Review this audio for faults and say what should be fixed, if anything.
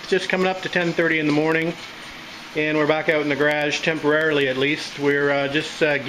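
Periodic USB or driver dropouts run from 0.12 s to 6.01 s. Every 0.1 s the driver stalls and a sliver of audio is skipped, producing around seventy evenly spaced ticks wherever sound is present. The waveform shows small jump discontinuities on a regular 0.1 s grid, and a spectrogram shows thin vertical broadband lines at the same spacing. To prevent this, stop or reschedule the background task that interrupts the bus, and give the audio thread higher priority or a larger buffer.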